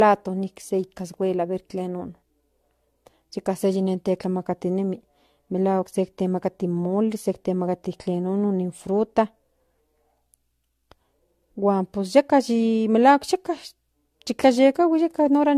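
Throughout the speech, the sound is swirly, smeared and hollow, with blurred consonant onsets and nothing above 14.1 kHz. This is generation loss, likely from around four successive lossy passes, each requantising on a shifted frame grid, consistent with AAC-LC at 64 kbit/s.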